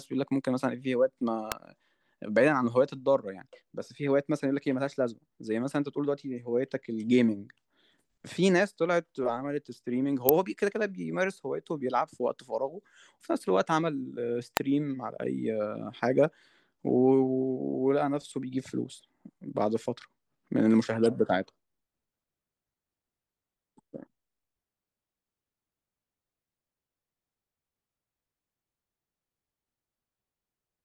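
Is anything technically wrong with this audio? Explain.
Yes. Electrical switching spikes occur at 1.52 s, 10.29 s and 14.57 s in the speech. Each is likely a brief arc from a nearby switch, motor or static discharge, picked up by the audio line as a spike just a millisecond or two long. Each is heard as a sharp snap laid over the speech. The first peaks near -10 dBFS, and the later two are louder, at roughly -5 dBFS.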